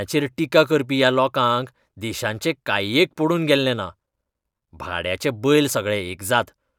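Nothing in this short bit of speech sounds technically off.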